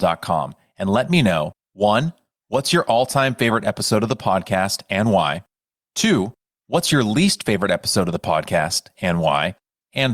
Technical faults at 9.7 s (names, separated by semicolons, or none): clock drift between sender and receiver; repeated timing corrections